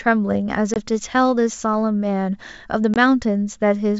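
Packet loss on an ADPCM call strikes twice, at 0.74 to 0.77 s and 2.94 to 2.97 s, each dropping about one 20 ms packet. The decoder's predictor and step size lose sync, so a hard-edged gap of silence is followed by speech returning with brief mistracking distortion before the wideband G.722-style sound settles.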